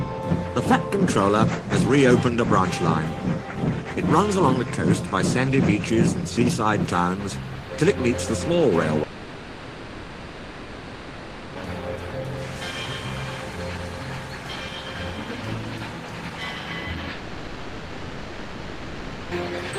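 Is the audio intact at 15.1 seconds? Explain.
Yes, at 15.1 seconds the audio plays through cleanly, with no dropout, click, distortion or other fault to be heard at that point.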